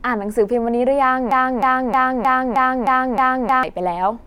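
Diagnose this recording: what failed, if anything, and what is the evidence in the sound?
Broken-record loop, 1.31–3.63 s: one 311 ms fragment repeats seven times, showing as identical tiled blocks in waveform and spectrogram. A stalled playback buffer likely resent its last chunk.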